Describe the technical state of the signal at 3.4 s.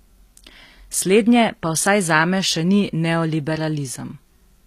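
HE-AAC compression at 3.4 s, as throughout: treble likely rebuilt from copied lower bands, leaving gritty, lispy s sounds and nothing above 14.9 kHz.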